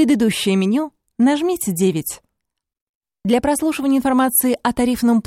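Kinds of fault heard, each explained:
No audible faults of any kind appear in this audio.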